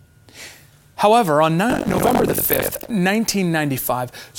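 Buffer tearing runs from 1.69 to 2.92 s. The playback write and read positions inside a ring buffer have slipped, so around a third of each buffer repeats speech from roughly a tenth of a second earlier. The hard joins give a robotic 46.9 Hz buzz, which fits a 1024-sample buffer.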